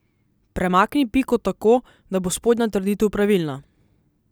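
No technical faults can be heard anywhere in this recording. Nothing in the speech calls for comment from a technical standpoint.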